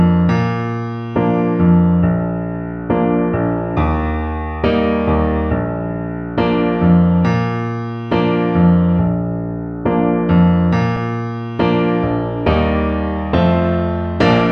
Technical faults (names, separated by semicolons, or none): block of digital silence